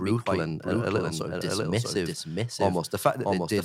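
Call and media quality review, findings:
Doubled audio track, whole clip: full second copy trailing about 0.7 s behind, roughly 5 dB down, full-band, dry, no decay or room colour. Reads as a hard echo, not reverb. Likely cause: same signal captured twice, second via slower path (e.g. monitor/loopback mixed back in), or edit leaving offset duplicate.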